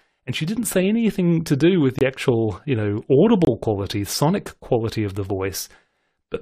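It's a speech clip with two short dropouts from a corrupt frame muted. Right after "anything to do with" the sound cuts out abruptly from 1.99 to 2.02 s, then comes back on "actual you". Again from 3.45 to 3.49 s, just before "quality sonic quality of". Each gap is roughly 40 ms, which fits a single compressed frame that the decoder rejected and the player filled with silence, and the timing doesn't shift around either hole.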